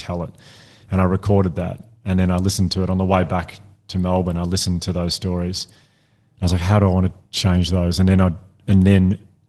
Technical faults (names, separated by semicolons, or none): none